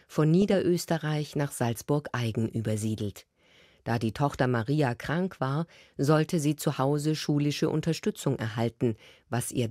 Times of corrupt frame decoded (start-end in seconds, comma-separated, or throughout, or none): none